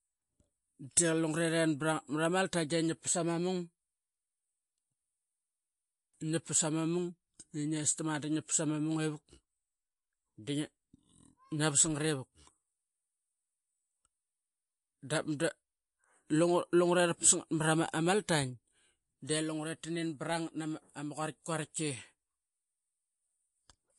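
From start to finish the speech carries a watery, swirling texture, and nothing is heard above 11.3 kHz, which points to a low bitrate around 48 kbps. The likely cause is MP3 compression: starved of bits, the encoder drops the treble at a fixed ceiling and zeroes faint frequency lines that flicker on and off between frames. That flickering, with chirpy s sounds and smeared onsets, separates it from a simple low-pass filter, which dulls without swirling.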